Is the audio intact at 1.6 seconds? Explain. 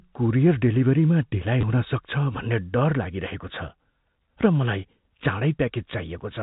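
No. Just after "कुरियर डेलिभरीमा ढिलाइ", from 1.61 to 1.63 s, there is packet loss with the last packet repeated. About 20 ms of audio went missing, and the receiver filled the gap by replaying the previous chunk, which fits two 10 ms packets. The repeated chunk gives a brief robotic stutter. On a waveform the cycle repeats exactly. A spectrogram shows a flattened, frozen slice.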